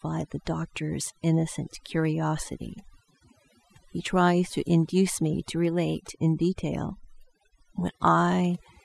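Overdone noise removal runs throughout: over-strong noise reduction kills bands near its noise estimate, leaving near-silent, twinkling gaps and taking quiet parts of the voice with them.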